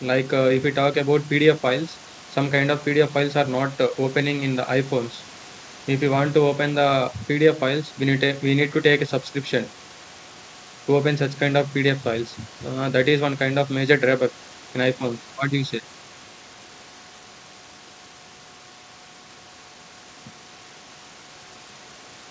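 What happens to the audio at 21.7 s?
Nothing goes wrong at 21.7 s: the speech carries on intact through the call path, with the band-limited sound of a wideband call codec that leaves nothing above 8 kHz.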